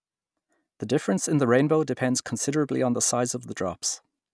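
No technical faults can be heard anywhere in the speech recording, with the signal continuous and intact throughout.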